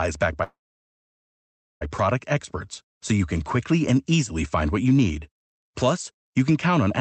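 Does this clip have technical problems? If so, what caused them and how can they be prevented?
Yes. From 0.43 s to 1.83 s there is a call audio freeze. The sound trails off into a brief fading buzz and then about 1.27 s of silence, likely because packets stalled and the jitter buffer ran dry. Unlike a packet-loss dropout, nothing is cut out: the speech picks up exactly where it stopped, just about 1.4 s late. A more stable network route or a larger adaptive jitter buffer would prevent this.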